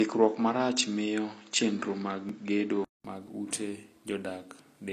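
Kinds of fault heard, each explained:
Low-bitrate audio saved at a high bitrate: this is likely a file that went through a low-bitrate codec and was then re-encoded as high-bitrate MP3, which keeps the damage rather than repairing it. The speech carries the smeared, swirly coding artefacts of the first pass, and nothing reaches above about 14.9 kHz. On a spectrogram that shows as a flat, hard ceiling across the whole clip, with patchy, blocky texture in the upper bands.
Input switched to a poorer device: for the first three seconds or so the speech comes through a narrower, duller path, likely a lower-grade microphone or headset profile. There's a faint added noise floor, roughly 55 dB down. At about 3.05 s a 200 ms gap leads into "mag ute", after which the band opens up and the level shifts by around 5 dB. On a spectrogram the ceiling visibly jumps upward after the gap.
Dropped buffer (overrun): at about 2.29 s the audio skips ahead, likely because incoming samples were overwritten before being read. 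Roughly 15 ms of sound is lost and the two sides are butted together with no silence between them. On a waveform this shows as an abrupt discontinuity, a sudden step in the wave's shape, and on a spectrogram as a thin vertical broadband line.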